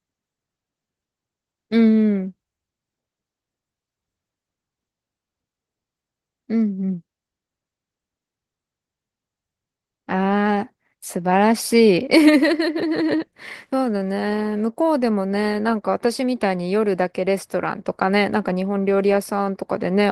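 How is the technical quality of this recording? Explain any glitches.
The quality is compromised by one fault that runs through the whole speech recording.

Opus voice compression, throughout: the speech sounds somewhat hoarse and slightly robotic, with plainly audible coding damage. This fits Opus in hybrid mode at around 16 kbps with 20 ms frames. Linear prediction codes the band below 8 kHz, a thin transform layer covers the top, and the excitation is coarsely quantised.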